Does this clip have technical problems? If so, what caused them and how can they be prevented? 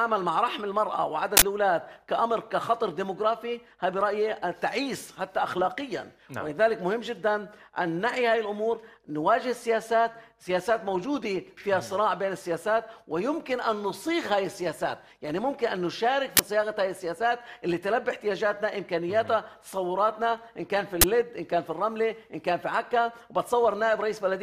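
Yes. Uninitialised buffers cause loud bursts of digital noise at 1.37–1.42 s, 16.37–16.39 s and 21.01–21.04 s. Each time, playback read a block of memory before any audio had been written to it, so leftover bytes came out as samples. The first burst lasts about 46 ms, fitting a 2048-sample buffer. The later two last about 23 ms, pointing to 1024-sample blocks. Prevention: zero-fill every buffer on allocation and output silence whenever a block is not ready in time.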